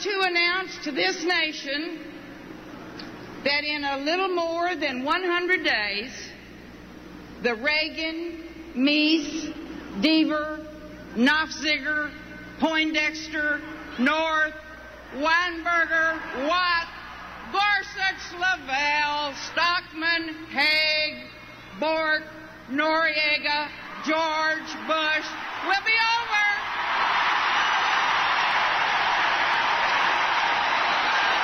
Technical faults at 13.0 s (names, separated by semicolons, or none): none